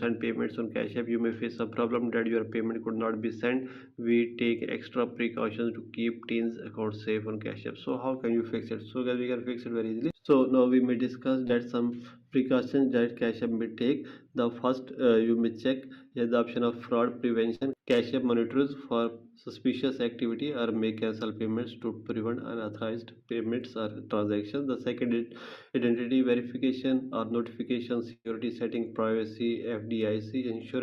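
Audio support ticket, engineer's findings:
Clock slip clicks. Regular ticks from 0.16 s to the end, about every fifth of a second. Likely two unsynchronised device clocks, around 150 ppm apart. One sample dropped or repeated each time the drift reaches a full sample. Single-sample slips. The interval stays even because it tracks the clock offset. Recommend locking both devices to one clock source.

Short concealed packet loss. 11.47 to 11.51 s: brief smear. About 20 ms of audio never arrived in time, covered by 17 ms of synthesised fill. 16.07 to 16.13 s: same symptom, longer. About 40 ms missing, 41 ms filled. Decoder extended the preceding sound, then crossfaded back into real audio. Component: receiver jitter buffer and concealment. Check the network path for late packets.

Burst of packet loss. 17.55 to 17.63 s: about 60 ms of audio gone. 58 ms of concealment, then playback resumes further on. 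28.13 to 28.27 s: larger gap. About 120 ms missing, 116 ms filled, including 40 ms of silence as the fill faded out. Receiver carried the last sound forward and lowered its level through each gap. Same path as above. Bursts point to congestion.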